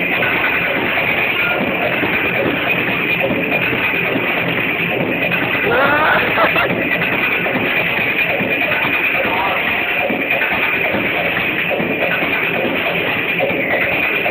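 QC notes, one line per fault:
Throughout, imaging from linear upsampling. The audio was raised from 16 kHz to 48 kHz by joining samples with straight lines. The top of the band sounds dulled. A faint mirrored copy sits between 8 and 16 kHz, roughly 30 dB down, adding a light metallic shimmer.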